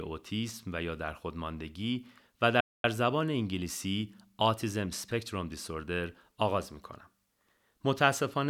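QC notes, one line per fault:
2.60–2.84 s, playback stall. The speech cuts off mid-flow and the output falls silent for about 240 ms, then resumes. The likely cause is the player running short of data or its output thread being blocked briefly.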